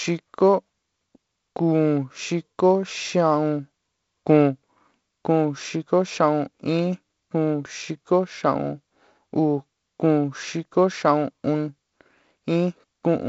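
No technical faults are audible.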